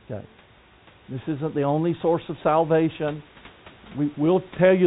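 No technical faults occur at any point in the speech, which comes through a telephone-style call path with nothing above 4 kHz.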